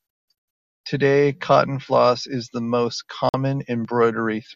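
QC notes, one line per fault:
3.29–3.34 s, digital broadcast dropout: the speech cuts to silence for about 48 ms as the receiver mutes over bad frames, which fits a couple of lost frames.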